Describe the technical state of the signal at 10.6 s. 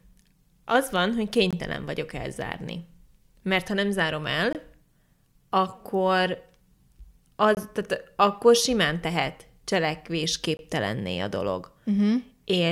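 A gap between chunks runs from 10.57 to 10.59 s: the speech stream is delivered in 3-second chunks, and about 21 ms of silence sits at this join, cutting the sound with a hard-edged hole.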